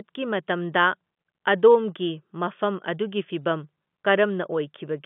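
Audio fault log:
No faults heard.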